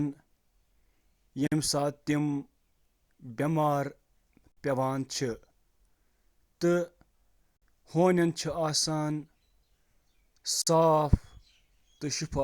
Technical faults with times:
1.47-1.52 gap between chunks
4.52-4.57 gap between chunks
7.57-7.62 gap between chunks
10.62-10.67 gap between chunks

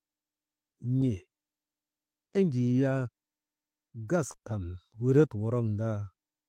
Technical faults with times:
4.31-4.36 short concealed packet loss

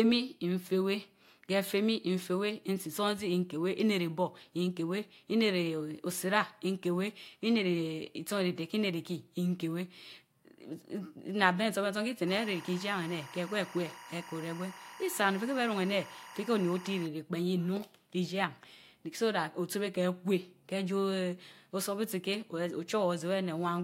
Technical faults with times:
12.27-17.06 timecode bleed

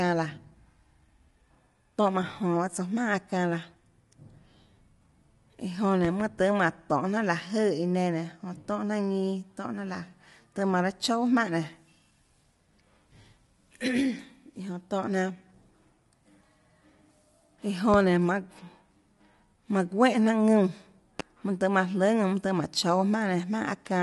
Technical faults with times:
0.00-24.02 low-delay AAC compression
6.05-6.23 loud pop
17.94-17.97 loud pop
21.20-21.22 loud pop

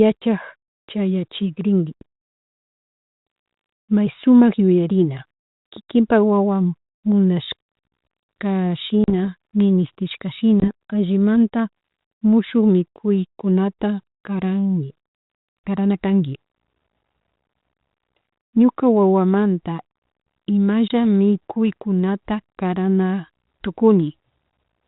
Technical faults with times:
9.04-9.10 packet loss on an ADPCM call
10.60-10.71 packet loss on an ADPCM call
20.88-20.93 packet loss on an ADPCM call

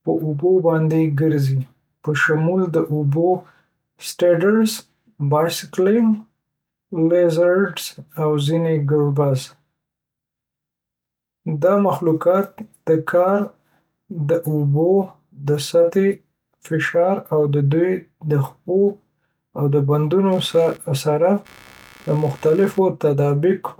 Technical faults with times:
20.31-22.79 computer activity noise

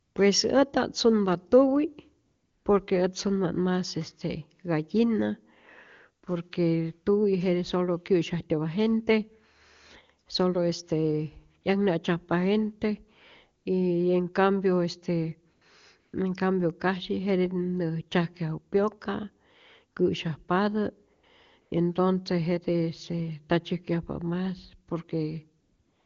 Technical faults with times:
0.01-0.15 AMR comfort noise
2.25-2.65 AMR comfort noise
11.61 AMR comfort noise
13.63 AMR comfort noise
15.53-15.61 AMR comfort noise
15.99-16.13 AMR comfort noise
21.13-21.23 AMR comfort noise
21.61-21.71 AMR comfort noise
25.61-26.06 AMR comfort noise

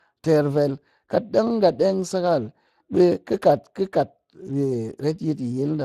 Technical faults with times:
0.00-5.85 Speex codec

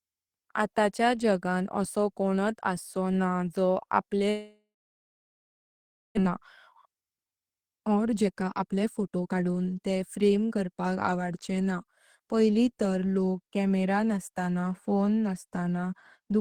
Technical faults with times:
4.29-6.19 long network dropout
6.26-10.74 jitter buffer speed-up

